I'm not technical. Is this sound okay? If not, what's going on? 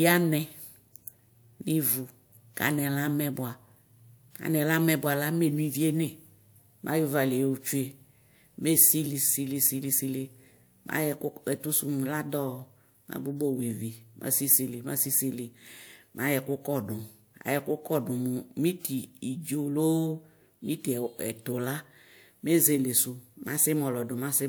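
Yes, nothing in this speech recording points to a technical problem with the signal.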